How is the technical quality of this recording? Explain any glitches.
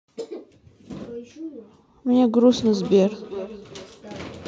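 Feedback echo between two devices sets in at 2.66 s and runs to the end. A second device in the room replays the call, and the first microphone picks it up again. Its echo canceller only removes its own playback. The speech comes back roughly every 400 ms, thinner and more ringing each time, peaking at about 16 dB below the speech.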